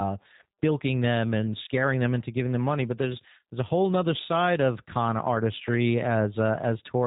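From start to finish the speech sounds slightly rough and synthetic, with a buzzy, reconstructed edge, and nothing above about 3.8 kHz, so sibilants and breath lose their air. This is G.729 codec damage, plainly audible, consistent with an 8 kbit/s voice link. Instead of carrying the waveform, the codec rebuilds each 10 ms frame from a vocal tract filter, a pitch predictor and a few pulses, so fine detail is approximated rather than preserved.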